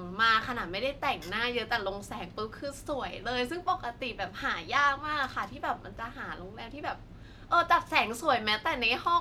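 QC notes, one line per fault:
No faults found in the speech clip.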